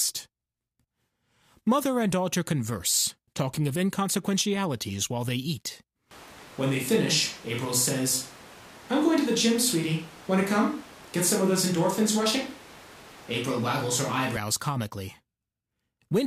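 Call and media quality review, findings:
Switch to a distant microphone, 6.11 s to 14.37 s, right after "inconsequentialities while they eat". Sound turns abruptly roomy and hollow, thinner low end, room noise around 25 dB under speech, no clear level drop. Likely close-mic dropout, fallback capture device picking up. Abrupt return at 14.37 s.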